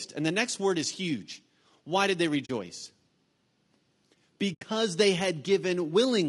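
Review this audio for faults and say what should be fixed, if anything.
Low-delay AAC compression runs through the whole speech clip: the voice sounds rough and grainy, with noise filling the gaps between harmonics and a thin, synthetic-sounding top band. The likely cause is an AAC-ELD encoder whose short frames resolve pitch harmonics poorly and need more bits than the stream has. The plainly audible damage suggests a bitrate of around 32 kbps. Raising the bitrate or using a longer-frame codec where delay allows would prevent it.

AAC frame loss with muting occurs twice. The first gap runs from 2.45 to 2.50 s, right after "did they". The second runs from 4.53 to 4.63 s. In each, the sound fades out and back in over a soft-edged hole rather than cutting abruptly. The decoder zeroed the spectrum of the missing frames, and the overlapping windows smear that silence at its edges. The gap lengths fit roughly 40 ms and 80 ms of lost audio. 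Packet-loss concealment or redundancy on the transport would prevent these holes.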